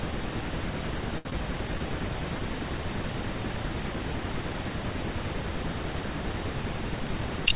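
At 1.18 s a packet arrives late and the jitter buffer runs dry, producing a short stall from a late packet. Rather than skip ahead, the receiver keeps extending the last sound for 69 ms until the packet turns up at 1.26 s, then resumes exactly where it left off. No audio is lost, but the playout delay grows by 69 ms from here on. The sound is held unnaturally long, with a faint buzz or a slight sag in level.

Shortly afterwards, between 1.30 and 1.32 s, there is a short concealed packet loss. About 20 ms of audio never reaches the decoder in time, and the receiver covers the gap by continuing the previous sound, following its pitch if voiced or using shaped noise if not, before blending back into the real signal. The result is a brief smear or wobble, and a short consonant can drop out entirely. The narrowband call path, with nothing above 4 kHz, fits a G.711 mu-law link at 64 kbps.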